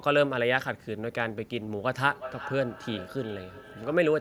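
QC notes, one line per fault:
2.02 s to end, feedback echo between two devices: the speech returns at a regular interval of roughly 400 ms, at its loudest about 15 dB below the direct signal. A second device in the room replays this microphone's audio, which the microphone picks up again, and neither echo canceller removes it.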